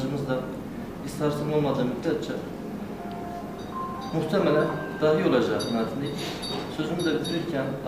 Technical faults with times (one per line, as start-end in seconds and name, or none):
none